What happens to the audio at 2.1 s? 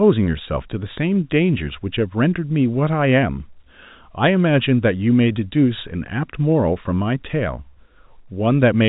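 Nothing goes wrong at 2.1 s: the speech there is intact, carrying only the band-limited telephone character of G.711 coding, with no content above about 3.8 kHz.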